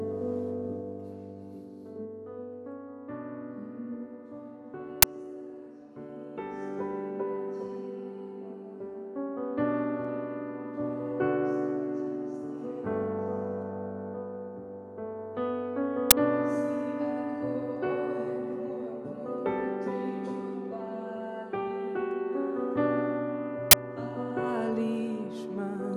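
There are three bursts of uninitialised buffer noise in the audio: short, harsh blasts of digital junk at 5.02 s and 16.11 s, each about 11 ms long, and a longer one of about 21 ms from 23.71 to 23.73 s. What you're hearing is a block played out before any real audio was written into it, so leftover memory came through as samples. The first two fit a 512-sample buffer, and the last one fits a 1024-sample buffer.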